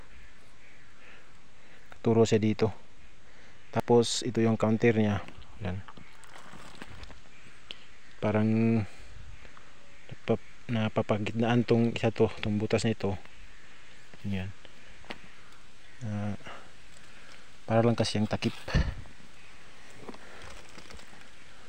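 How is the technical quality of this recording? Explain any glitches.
The recording has three brief glitches, each a sudden jump in the sound, at 0.38 s, 3.80 s and 20.44 s. These are most likely dropped buffers (overrun): the recording software failed to collect a block of samples before the hardware overwrote it, so roughly 40 ms of audio is lost and the surrounding material is spliced together. Unlike a dropout, there is no gap of silence. The audio skips forward at an abrupt join.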